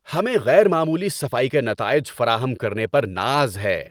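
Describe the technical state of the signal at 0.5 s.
At 0.5 s the signal is in the middle of a run of repeated timing corrections that lasts from about 0.04 s to 3.75 s. The receiver keeps trimming short slivers out of the stream so it can keep up with a sender running faster than it, and the result plays at an effective 105% speed. Each cut is tiny and they come at uneven intervals, so any audible trace is slight hiccups or an unsteady tempo rather than clean gaps. Unlike packet-loss dropouts, nothing goes silent and no muffled concealment fills a hole. The edits all go one way and keep coming.

Behind that lies clock drift between sender and receiver, present through the whole clip. The sender's clock runs roughly 5 percent fast, so the jitter buffer keeps overfilling and has to be drained by those cuts. That makes it different from ordinary network jitter, which pushes the buffer back and forth in both directions. 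Here the pressure never lets up, and it shows, if at all, as a slight, unsteady speed-up with small stumbles instead of sporadic stalls or bursts.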